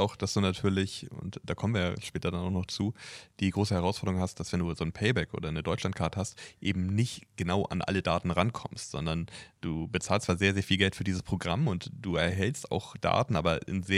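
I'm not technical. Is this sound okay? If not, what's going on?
Yes, this sound is okay, and there's nothing going on that needs fixing.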